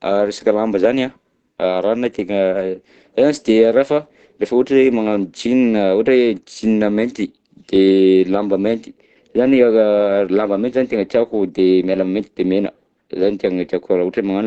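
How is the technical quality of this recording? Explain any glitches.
The recording has clearly degraded technical quality, with one fault running throughout and a second appearing near the end.

Throughout the clip, the speech sounds muffled and hoarse, with nothing at all above about 8.7 kHz. The likely cause is Opus compression running in its speech-oriented SILK mode, at a bitrate that points to roughly 16 kbps. At that rate the encoder limits itself to wideband audio and models the signal coarsely, so fine detail and upper harmonics are lost, leaving plainly audible codec damage.

From 8.87 s to the end, the sound turns duller and more closed-in than the earlier part. This is de-emphasis applied wrongly: a treble-cutting filter meant to reverse pre-emphasis was applied to audio that didn't need it. The response slopes smoothly downward, reaching about 8 dB of loss at 10 kHz relative to 1 kHz. 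That further softens sibilance and consonant clarity on top of the already narrowed band.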